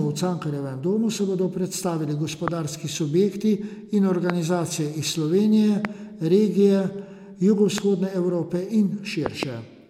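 A likely electrical spike, from a switch, plug or static, hits the chain as loud pops at 2.48, 4.3, 5.85 and 7.78 s, then a double pop from 9.26 to 9.45 s, each standing well above the speech.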